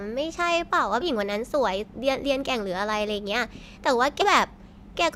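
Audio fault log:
1.01–1.04 s and 4.21–4.26 s, compressed frames skipped: the speech jumps ahead by roughly 0.4 s, then 0.3 s. This fits runs of about twenty and fifteen 20 ms frames that were missing or rejected.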